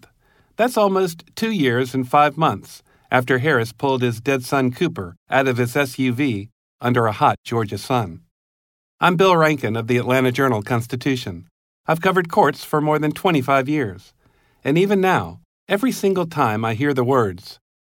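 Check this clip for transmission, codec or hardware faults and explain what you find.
No faults turn up in this clip.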